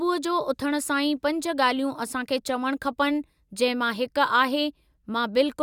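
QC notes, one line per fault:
No faults heard in this speech recording.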